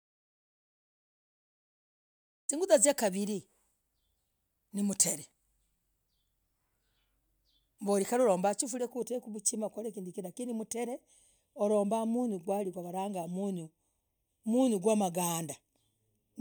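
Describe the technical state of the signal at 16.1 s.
At 16.1 s the speech carries channel delay (comb filtering), running from 8.92 s, just after "ulombah chifuria", to the end at 16.41 s. One channel lags by a fraction of a millisecond. Summed to mono, this cuts evenly spaced notches from around 1.5 kHz. The voice sounds hollow and phasey.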